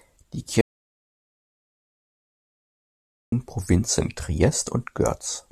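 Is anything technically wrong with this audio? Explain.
Yes. There is an audio dropout to silence from 0.61 to 3.32 s. The speech cuts off abruptly and returns mid-flow about 2.7 s later. The gap is silent, with no room tone or background noise underneath. That points to the input signal being lost while recording continued and silence was written in its place. A disconnected device, a failed link or an accidental mute is the likely cause. Whatever was said during that stretch is gone.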